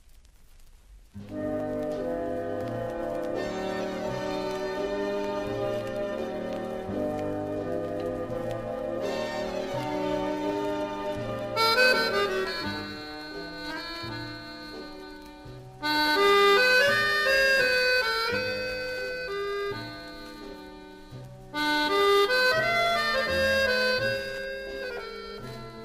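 No technical faults can be heard anywhere in the recording.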